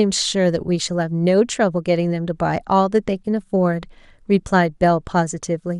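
Throughout the speech, the encoder has likely starved MPEG Layer II's 32 sub-bands of bits, consistent with MP2 compression at about 80 kbps, so upper bands switch off and flicker while the rest are coarsely quantised, leaving a dull, gurgling, granular sound.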